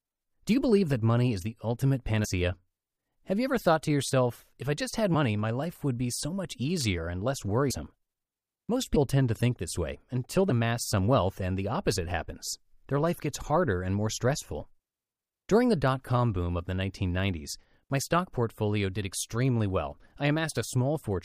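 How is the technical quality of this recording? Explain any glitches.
The recording is marred by compressed frames skipped, at 2.24, 5.14, 7.69 and 8.95 s. Each time, whole compressed frames never reach playback, so the speech jumps ahead by roughly 70, 200, 70 and 100 ms. Those gaps fit multiples of a 26.1 ms frame. Overlapping neighbour frames soften each join into a brief smeared blip, not a click.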